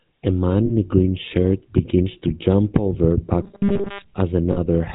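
The speech runs through the GSM full-rate codec from start to finish, a coder that models the vocal tract, drives it with sparse regular pulses and discards everything above 4 kHz, running here at 13 kbps. The result is a plainly audible buzzy, gravelly roughness over a dull, band-limited tone.

Lost GSM frames occur at 0.66 to 0.71 s, just before "a green shirt begins," and again at 4.52 to 4.58 s. Each gap lasts about 40 ms, consistent with two missing frames. The decoder fills these gaps by repeating the settings of the last good frame, producing a brief rough, metallic ring in place of the real speech.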